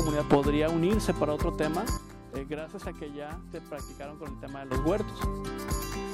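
At 1.97 s a sudden gain jump occurs, likely from a digital gain setting being applied in a single step with no ramp, so the level changes between one sample and the next. The sound and its background noise drop together by about 11 dB, an abrupt step down rather than a fade. At 4.71 s the gain returns just as suddenly, and the full level snaps back with the noise floor rising alongside it.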